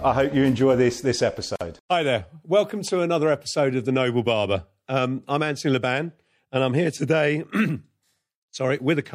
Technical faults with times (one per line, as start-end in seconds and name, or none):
0.00-9.14 MP3 compression
1.56-1.61 gap at a join of encoded pieces